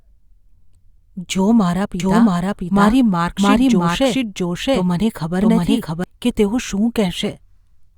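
From 2.00 to 6.04 s the speech carries a doubled audio track: a second, full-band copy trails the original by about 0.7 s at roughly equal level, with no decay or room colour, entering and dropping out abruptly. This likely comes from a slower capture path mixing the same signal in again.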